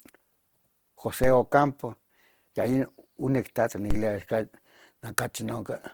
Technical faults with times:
0.00-5.93 Opus compression
1.24-3.91 DC step

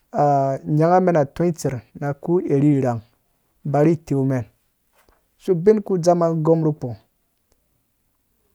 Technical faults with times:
none

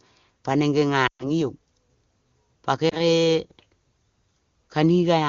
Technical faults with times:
1.07-1.31 lost AMR speech frames
2.89-3.00 lost AMR speech frames

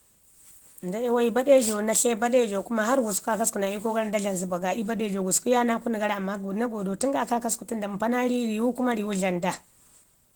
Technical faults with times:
0.00-10.35 Opus compression

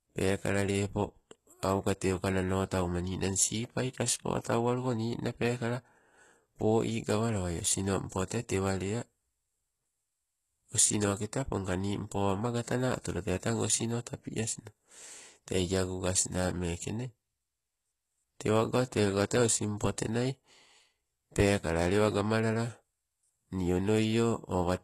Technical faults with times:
0.00-24.83 HE-AAC compression

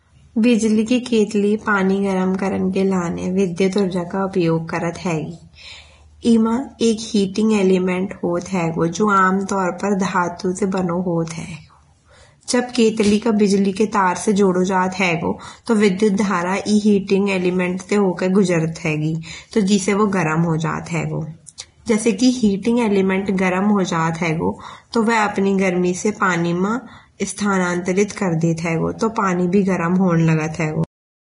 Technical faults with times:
0.00-31.21 Vorbis compression
30.84-31.21 cut-off end

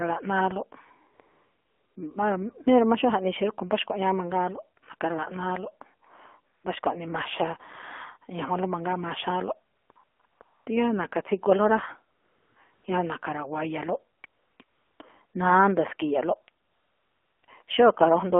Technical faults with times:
0.00-18.40 AMR narrowband mobile codec
1.14-1.96 AMR comfort noise
6.54-6.64 AMR comfort noise
9.74-10.66 AMR comfort noise
12.16-12.84 AMR comfort noise
14.18-15.00 AMR comfort noise
15.26-15.34 AMR comfort noise
16.64-17.68 AMR comfort noise

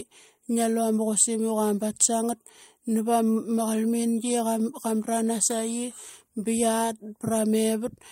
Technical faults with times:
none

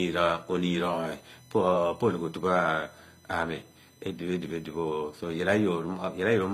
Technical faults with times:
0.00-6.53 USB whine
0.00-6.53 transcoding between lossy codecs

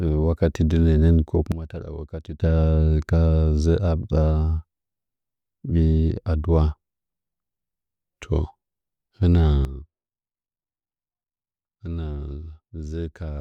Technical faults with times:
1.52-2.42 sudden gain jump
9.65-13.41 sudden gain jump

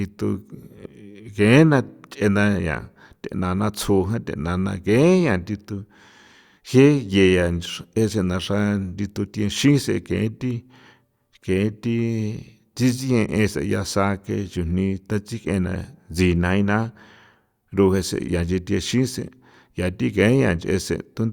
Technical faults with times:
none

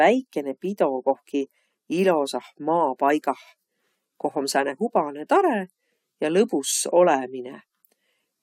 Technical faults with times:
none

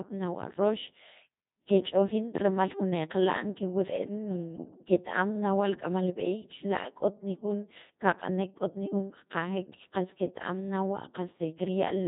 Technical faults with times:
0.00-12.07 Codec 2 vocoder

